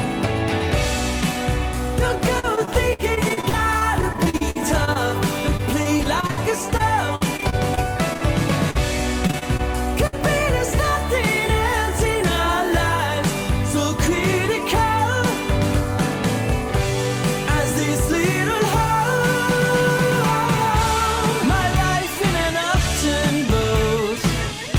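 From 2.39 to 4.97 s, 5.57 to 6.39 s, 6.77 to 8.23 s and 9.27 to 9.61 s the audio turns choppy and robotic. This is repeated packet loss: gaps of up to 62 ms keep arriving, each bridged by extending the previous sound. The concealed share is about 15 to 23 percent of each span. A spectrogram shows frequent smeared, repeating vertical blocks, and the waveform shows looped, cycle-copied segments.

At 8.71 to 8.77 s, short concealed packet loss drops about 40 ms. The receiver continues the preceding sound and blends back, leaving a brief smear or wobble. On the spectrogram this is one narrow stretch where the sound is continued instead of evolving.

At 10.07 to 10.15 s, a burst of packet loss removes about 60 ms. The concealment holds the last sound and fades it, giving a short buzz or hiss before the audio resumes further on. The waveform shows a tapering envelope, then a jump.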